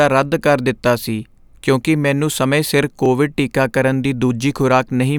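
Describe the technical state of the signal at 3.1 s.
Right around 3.06 s, just after "ਕਿਉਂਕਿ ਮੈਨੂੰ ਸਮੇਂ ਸਿਰ" and before "ਟੀਕਾਕਰਨ ਦੀ", there's a repeated buffer. Fresh audio didn't reach the output in time, so the device replayed its last chunk once more. That chunk is only about 1.33 ms, which fits a 64-sample buffer, so the doubled sliver and its hard joins come across as a tiny click. Essentially nothing of the speech goes missing.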